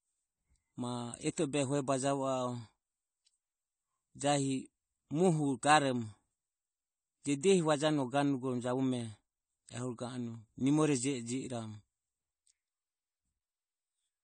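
Throughout, the speech was likely squeezed through low-bitrate AAC compression, fitting roughly 32 kbps, which cuts everything above 9 kHz and leaves it dull, smeared and warbling.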